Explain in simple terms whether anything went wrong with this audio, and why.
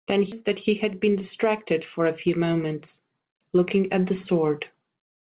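Two things went wrong, both early in the speech.

At 0.32 to 0.34 seconds there is a skip ahead. About seven tenths of a second of speech never plays. Later audio was already waiting, and the missing stretch was dropped, so playback jumped forward. Nothing fills the hole. The sound before and after the jump is joined almost directly, so the speech seems to lurch forward with a piece missing.

From 0.41 to 2.07 seconds comes a jitter buffer speed-up. After the jump, the receiver was still holding more audio than it wanted. To shrink that backlog, it cut many tiny slivers out of the sound, each only a vibration or two of the voice long. In total it removed roughly a tenth of a second. The speech runs about 5 percent faster but keeps the same pitch, so it sounds slightly hurried.

Throughout the clip, the call system passes nothing above 4 kHz, which gives the phone-line sound expected from this path.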